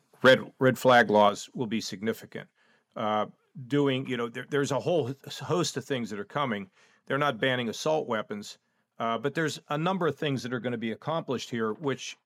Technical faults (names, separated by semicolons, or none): microphone overload; microphone volume stepped down